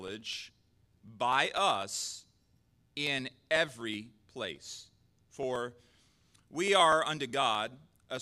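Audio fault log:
0.08 to 8.17 s, periodic USB or driver dropouts. The speech carries a steady run of small ticks, roughly seventy of them, one every 0.124 s. Each marks a brief loss of audio, around half a millisecond. The missing piece is skipped, not filled with silence, so the waveform jumps and clicks. The even spacing points to a background task stalling the USB bus or audio driver at a fixed interval. The ticks sound only where there is signal.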